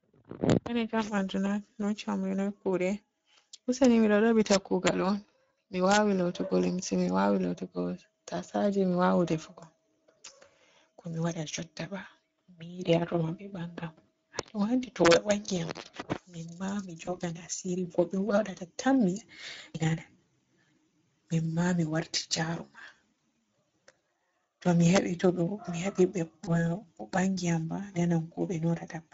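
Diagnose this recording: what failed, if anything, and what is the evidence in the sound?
The codec stage is the first problem: Speex coding runs the whole way through. The speech has that hoarse, noisy CELP texture, with plainly audible damage. The bit budget for the excitation sounds thin, which fits a middle-quality mode of about 16.8 kbps.

Integer overflow in the sample-format or gain stage gives violent cracks that are much harsher than clipping. They land at 0.50–0.52 s, 3.85 s, 4.51–4.88 s, 5.92–5.97 s (just before "lootugo limse"), 14.39 s, 15.05–15.31 s and 24.96–24.98 s (just before "to mi"). Loud peaks exceeded the limit by only about 0 to 2 dB, but instead of being limited they wrapped to the opposite sign.

On the network side, VoIP packet loss was concealed by the speech codec at 17.05–17.18 s and 26.45–26.61 s. Each gap fits a single lost 20 ms frame. The decoder stretched its last pitch and filter into a fading smear, and the sound stays weak or distorted for tens of milliseconds or more before recovering.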